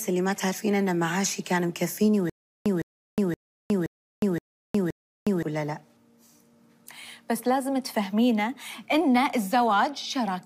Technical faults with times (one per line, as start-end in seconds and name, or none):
2.30-5.43 stutter with silent gaps